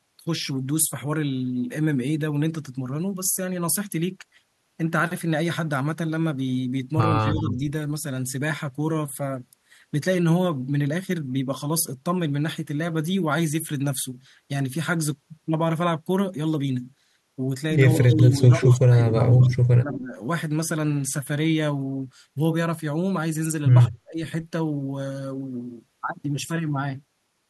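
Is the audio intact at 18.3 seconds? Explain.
No. At 18.3 seconds the speech sits inside a stretch of speech suppressed in double talk, running from 17.96 to 20.17 s. The level dips by up to about 25 dB. This is likely an echo canceller turning down the talker along with the far side during overlap.

An echo leak also ends right at 18.3 s, after starting at 18.19 s. A brief delayed copy of the voice comes back about 194 ms late, only a little quieter than the speech. It is likely residual loudspeaker pickup that the echo canceller missed.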